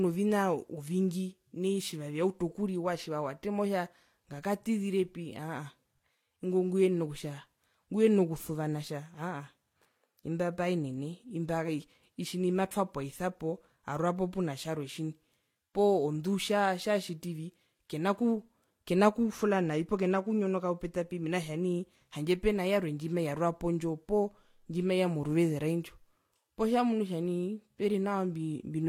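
Speech, with two layers of codec damage heard together across the whole clip. Nothing remains above 18.4 kHz. This is likely transcoding between lossy codecs. Vorbis artefacts, at around 48 kbit/s, were re-encoded by HE-AAC near 40 kbit/s, which adds its own artefacts on top.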